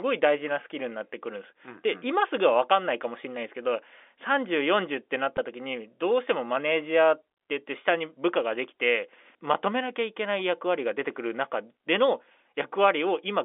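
At 5.37 s there is a brief packet loss with pitch repetition. About 10 ms of speech went missing, which points to a single lost packet. The receiver filled the gap by repeating the last pitch cycle, giving a tiny held buzz within the band-limited G.711 telephone sound.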